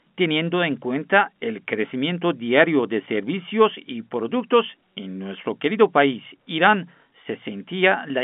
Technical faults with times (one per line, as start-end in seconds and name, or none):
7.14 packet loss with pitch repetition